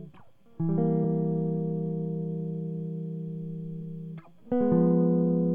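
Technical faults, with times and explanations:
1.00 s and 3.78 s: damaged data in a compressed stream. The music breaks into a brief glitch at each point, over in about 10 to 14 milliseconds. Part of the compressed data there is wrong. The decoder cannot read those bytes as valid frames. It loses its place in the stream and hunts for the next frame header. While it does, garbled or missing output comes through. That gives the short glitch before the music resumes.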